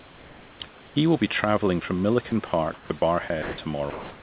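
From 0.0 to 0.96 s, the opening pause carries comfort noise in place of the background. For about 880 ms, the real room noise, which sits about 24 dB below the speech, gives way to a smooth, featureless hiss. The likely cause is discontinuous transmission: the sender stopped transmitting during the pause, and the receiver generated synthetic noise shaped to match the background. The audio is band-limited, with nothing above 4 kHz, which fits a 64 kbps G.711 A-law call path.

Between 2.3 and 3.02 s, the sound is chopped by the voice detector. About 280 ms is replaced by synthetic fill. The detector likely judged quiet parts of the speech to be silence, so it toggled sending off and on. A second chop follows from 3.28 to 3.58 s, with about 180 ms replaced.

From 3.9 s to the end, comfort noise again replaces the background for about 330 ms. The level does not change. The texture does, turning flat and detail-free.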